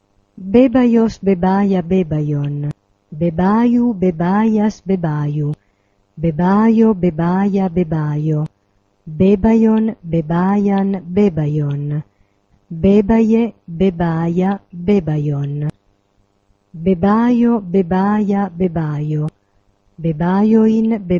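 From 0.14 to 21.19 s, clock slip clicks recur roughly every 50 ms as a soft rattle, likely from unsynchronised clocks about 400 ppm apart dropping or repeating single samples.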